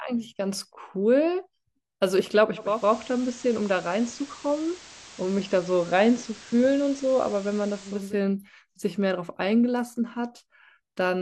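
Speech, with digital radio blending to analogue from 2.55 s to 8.18 s: a 390 ms cross-fade drops the receiver onto the FM signal, bringing hiss roughly 20 dB below the speech and a level shift of about 1 dB, then blends back.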